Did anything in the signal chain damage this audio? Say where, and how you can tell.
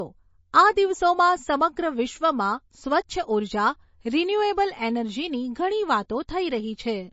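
Yes, and it's at the codec stage, through the whole clip. The speech has a hard ceiling with nothing above about 7.6 kHz, and there's a plainly audible watery, swirly quality on top of it. That's likely MP3 compression at a starved bitrate, consistent with something around 32 kbps. With too few bits, the encoder chops the treble at a fixed point and keeps dropping quieter frequency lines in and out between frames, which produces that shimmer.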